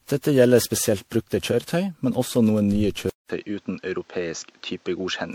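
From the start, the speech sounds swirly, hollow and smeared, with softened consonant attacks: generation loss, likely from around ten successive MP3 re-encodes at a rate that fits 96 kbit/s. A spectrogram shows scattered holes and blotchy high-frequency energy.

At 3.1 s the waveform drops to 200 ms of silence, then the sound turns duller at about the same level. This is an input switched to a poorer device, likely a lesser microphone. Above 7.6 kHz the spectrogram goes empty, and a new noise floor about 35 dB down appears.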